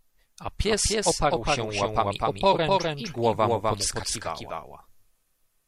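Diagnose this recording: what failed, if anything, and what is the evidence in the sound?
The speech has been captured or assembled twice, most likely through a second, slower capture path or an edit that left two copies of the same material out of step. The result is a doubled audio track: through the whole clip, every syllable returns roughly 300 ms later at about the same loudness as the original. The repeat carries the full frequency range with no decay or room colour, which rules out an acoustic echo or reverb and points to a second copy of the signal itself.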